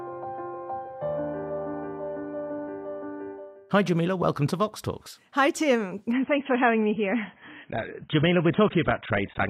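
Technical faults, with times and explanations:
6.12 to 9.50 s, adaptive stream at a lower bitrate. At 6.12 s the quality drops suddenly, with no gap or pause. From there to the end, nothing remains above about 3.8 kHz. The treble is gone and the sound turns dull. Codec artefacts grow more obvious. The stream has switched to a much cheaper version, which fits a fall from around 96 kbit/s to 16 kbit/s AAC, most likely because the connection slowed.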